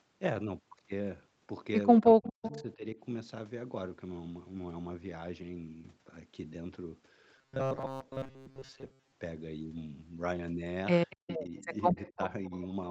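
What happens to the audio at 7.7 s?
At 7.7 s you're in robotic sound from repeated short buffers, running 7.37 to 9.12 s: a rigid 133 Hz buzz, likely from a roughly 7.5 ms chunk looping over most of the real audio.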